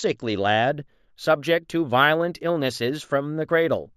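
From 0.69 s to the end, imaging from linear upsampling: straight-line interpolation fits a raise from 16 kHz to 48 kHz, dulling the top and leaving a faint mirror copy between 8 and 16 kHz, roughly 30 dB down. Unlike a plain low-pass, sibilants carry a light metallic shimmer.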